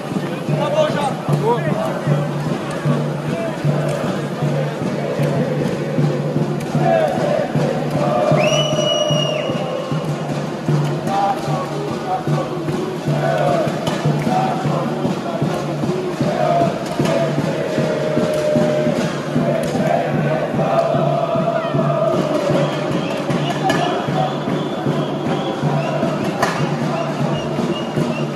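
No technical faults can be heard anywhere in the audio, and the signal holds steady without interruption.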